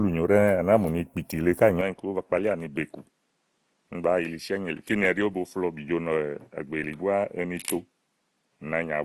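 Opus compression runs through the whole speech clip: the top end reaches about 20.3 kHz, so the band is not narrowed, but the codec damage is plainly audible. The sound is rough and grainy rather than swirly, which is likely the music-mode encoder refilling starved bands with folded or noise-like content, and the degree of it fits a rate around 24 kbps. An input switched to a poorer device follows at 1.81 s and lasts to the end. With no gap at the change, the sound turns duller as everything above about 11.4 kHz vanishes, the level drops by a few decibels, and a faint new noise floor sits well beneath it. That is likely the recording changing over to a narrower-band microphone or headset path with its own tone and background noise.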